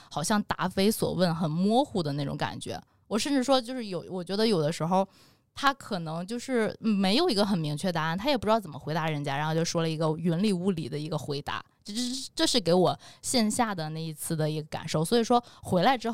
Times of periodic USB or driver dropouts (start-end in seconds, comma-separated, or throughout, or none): 8.78-16.07